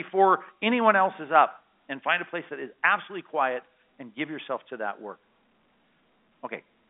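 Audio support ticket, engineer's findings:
Listened through the speech: nothing stood out, with the sound limited to the normal telephone band expected of G.711 A-law coding, nothing heard above about 3.8 kHz.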